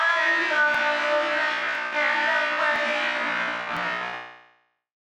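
The audio was cut into 1-second chunks that overlap, so each new chunk begins about 7 ms before the previous one ends and that sliver plays twice. The repeated fragment produces a brief click or stutter at every join: 0.75, 1.75, 2.76, 3.77 and 4.77 s.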